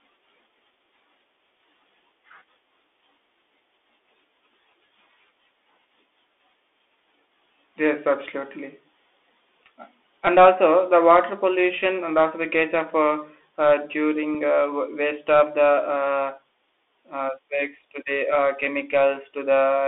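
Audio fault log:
Throughout: Bluetooth CVSD headset codec. The sound is squeezed into a telephone band of roughly 300 Hz to 3.5 kHz, and the one-bit delta coding plainly roughens it. Its adaptive step lags fast, loud high content, so sibilants turn scratchy, with a grainy hiss underneath, which fits a 64 kbps link.
14.34 s: unconcealed Bluetooth headset packet loss, just after "case of uh uh". About 3.8 ms of audio drops out, about one packet's worth, and nothing fills the gap. The hole has hard edges, and the sound resumes quieter for a moment as the delta coder recovers.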